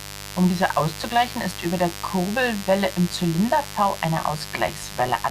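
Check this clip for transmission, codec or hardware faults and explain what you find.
There's one hardware fault here: mains buzz running the whole way through the speech. It's 50 Hz interference, and the sharp switching spikes twice per cycle spray harmonics up into the kilohertz range, so you get a steady, raspy buzz sitting fairly close under the voice.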